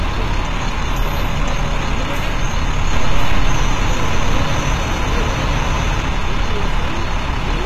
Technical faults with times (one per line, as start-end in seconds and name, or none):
0.00-7.66 HE-AAC compression
2.92-6.02 doubled audio track